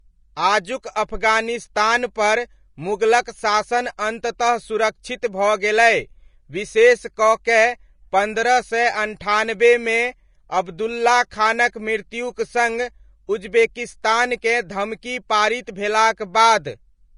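Throughout the speech, nothing sits above 10.5 kHz, and a spectrogram shows a flat, hard ceiling there. The leftover codec artefacts fit a roughly 33 kbit/s Vorbis source, likely re-saved as high-bitrate MP3: low-bitrate audio saved at a high bitrate, the lost detail never restored.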